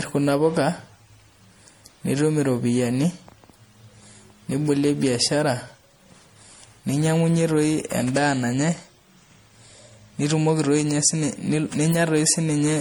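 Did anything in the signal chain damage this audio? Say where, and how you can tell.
Yes, at the codec stage, across the whole clip: it sounds like generation loss, with swirly, hollow speech and blurred consonant attacks, more than a single 64 kbit/s MP3 would give. It's likely from re-encoding around five times, each pass quantising afresh on a shifted frame grid.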